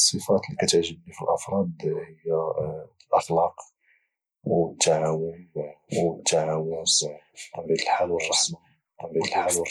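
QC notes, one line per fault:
5.05 s to end: doubled audio track. From 5.05 s a second copy of the speech joins the mix and runs to the end of the clip. It trails the original by about a second and a half. It is roughly as loud as the original. The copy is full-band and dry, with no decay or room colour. It begins abruptly, and the two layers overlap. The likely cause is a second, slower capture path or an edit holding two out-of-step copies.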